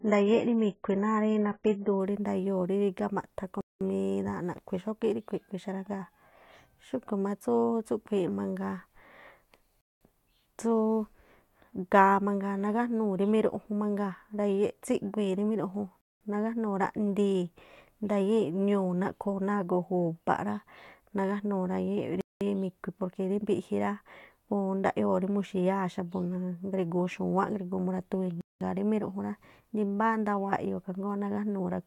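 A speech recording played from an adaptive stream that began on a low-bitrate version before switching up. For the first 2.0 s nothing above about 7.7 kHz survives and codec artefacts are heavier, consistent with roughly 16 kbit/s AAC. The sound then brightens abruptly, with no break, to a quality that fits about 96 kbit/s. There is also a gap between chunks: the audio arrives in 6 s pieces with 200 ms of silence inserted at each join. This leaves short holes at 3.61, 9.81, 16.01, 22.21 and 28.41 s, recurring every 6.2 s.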